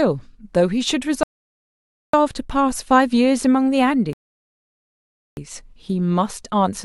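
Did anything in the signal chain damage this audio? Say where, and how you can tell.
Yes. The damage happens at playback, where two rebuffering stalls interrupt the speech. The first runs from 1.23 to 2.14 s and adds about 0.9 s. The second runs from 4.13 to 5.37 s and adds about 1.24 s. Each time the sound drops cleanly to silence, then picks up at exactly the point it left. Nothing is skipped. The player's buffer emptied before more data arrived, so it waited, stretching the clip instead of losing audio.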